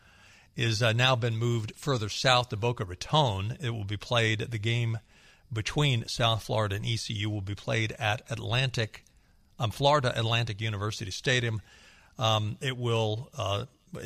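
No technical faults can be heard anywhere in the recording.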